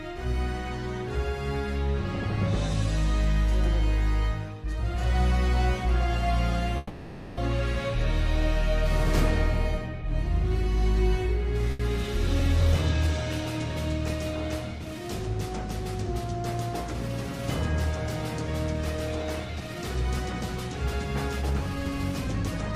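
A call recording with three network-related faults. From 6.77 to 7.39 s there is a call audio freeze. The last sound is stretched into a fading buzz or hiss for about 600 ms, and then the audio continues exactly where it stopped. Packets were likely held up in transit until the jitter buffer ran dry. Nothing is lost. A gap of about 600 ms is inserted, and everything after it is delayed by that much. This is what separates it from a loss burst: the material on either side joins seamlessly.

From 11.71 to 11.81 s there is a burst of packet loss. About 80 ms of sound never arrived in time to be played. The receiver filled that span by continuing the last sound and letting it decay. When the audio resumes it has skipped ahead, so the 80 ms in between is gone rather than postponed. The filled stretch is brief compared with the freeze.

From 19.46 to 21.55 s there is a jitter buffer speed-up. 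The buffer had built up more audio than it targets, so the receiver trimmed many tiny pitch-period pieces to shed the excess, around 150 ms in total. Playback runs at roughly 106% speed while the pitch stays unchanged. The result sounds hurried rather than higher, which distinguishes it from a simple resampling error.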